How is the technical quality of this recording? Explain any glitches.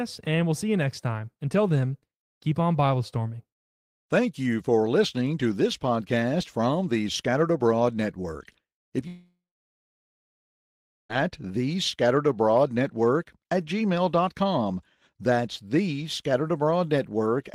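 The recording has one serious glitch: a long network dropout from 9.07 to 11.11 s. About 2 s of speech is missing. The last sound smears into a fading buzz for roughly a third of a second, then about 1.7 s of silence follows before the audio resumes further on. The likely cause is a stall in the stream, with the receiver inventing filler until real audio returned. On a waveform this appears as a decaying tail and then a flat line; on a spectrogram it is a smeared, fading band followed by a blank gap.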